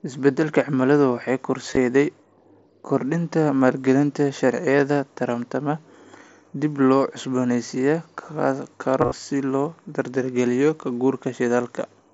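Speech over a Bluetooth headset link loses voice packets at 1.71–1.77 s, 7.41 s, 9.01–9.12 s and 11.49 s, concealed Bluetooth headset packet loss. The phone patches each gap by repeating recent waveform. The lone loss at 7.41 s is nearly hidden, and the runs leave brief buzzy tones, longest near 9.1 s, over the mSBC headset codec's wideband sound.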